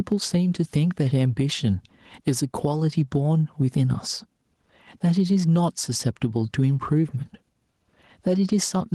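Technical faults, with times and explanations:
Throughout: gain pumping. The gain swings around 10 dB, so speech sounds squashed, likely from excessive mic gain feeding a fast limiter. The waveform shows a flattened envelope.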